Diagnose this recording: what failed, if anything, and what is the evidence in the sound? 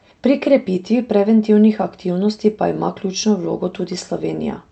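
Nothing failed: the speech came through an Opus call path, heard as a top end that stops near 8 kHz, and nothing in the recording points to a failure at any stage.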